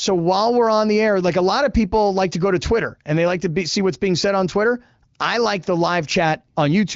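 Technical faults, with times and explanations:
Nothing here counts as a technical fault: the speech runs through a wideband HD Voice codec whose sound fits a fairly high rate of around 18 kbit/s, with the audio band stopping short of 7.5 kHz and any coding trace faint at most.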